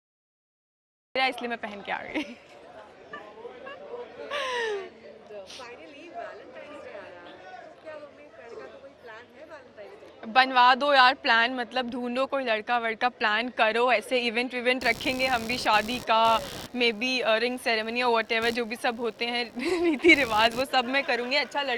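The first 1.16 s are digital silence, and the sound then appears abruptly, already in progress. This is a cut-off start: capture began late, so the first thing heard is the middle of an event rather than its beginning. There is no attack and no fade-in. The level jumps straight from nothing to full signal at 1.16 s, which makes the opening sound truncated and unnatural.

From 14.81 s to the end of the clip, a buzzing, chirping layer of computer activity noise sits under the sound. It pulses at around 70 times per second, roughly 20 dB below the signal. Changing processor or peripheral load is disturbing the shared ground of the audio circuitry, so the interference follows the machine's activity, not the audio itself. It is a rough, scratchy texture running independently of what is being recorded.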